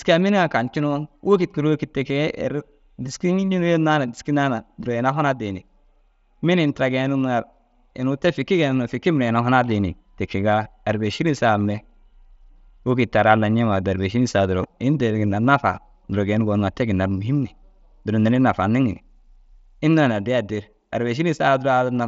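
Nothing stood out on listening to this speech, which comes through a Bluetooth mSBC headset link with its content ending at about 7.7 kHz.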